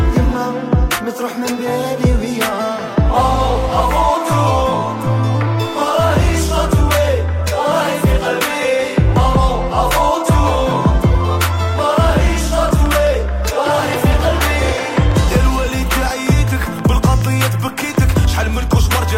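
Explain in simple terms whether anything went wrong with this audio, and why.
From 12.2 s to 19.1 s, a train of clicks runs over the sound. About forty sharp ticks arrive, roughly 5.7 each second, at an uneven pace. They stand out above the audio. The likely cause is electrical interference or a faulty connection or power supply.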